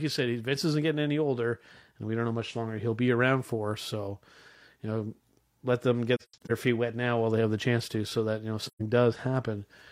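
At 6.16 to 6.51 s, between "you know let them" and "feet wet now while", AAC frame loss with muting silences about 213 ms in scattered gaps. At 8.66 to 8.81 s, after "that you know if", 128 ms vanishes. Zeroed frames fade through overlapping windows, giving soft-edged holes rather than a hard dropout's abrupt cut.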